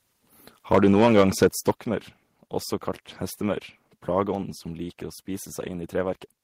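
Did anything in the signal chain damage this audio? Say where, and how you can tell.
Yes. From 0.72 to 1.7 s the speech peaks get flattened and take on a harsh, crackly edge. That's microphone overload at the converter, most likely from input gain set too high, with peaks pushed about 8 dB past full scale and roughly one sample in twenty clipped.

There are also two sudden level drops in call processing, at 0.75 s (about 2 dB) and 1.74 s (about 6 dB), where voice and background fall together. That's the microphone volume stepped down, likely the call software reacting to the clipping by cutting the device's input gain in one step.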